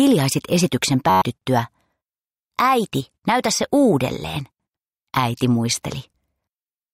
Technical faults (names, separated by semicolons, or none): system hang loop